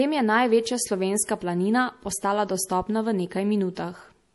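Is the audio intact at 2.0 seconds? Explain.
No. Throughout the speech, likely MP3 compression at a bitrate near 48 kbps, there is nothing above 11.5 kHz, and dropped weak bands flicker between frames, giving watery, swirly sibilants that a simple low-pass filter wouldn't produce.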